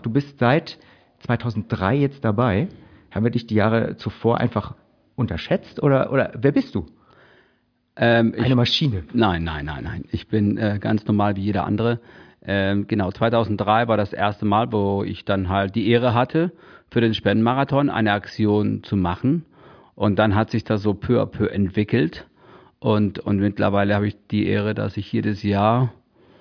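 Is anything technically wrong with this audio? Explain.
No, nothing technical stands out in this speech recording; it all sounds as it should.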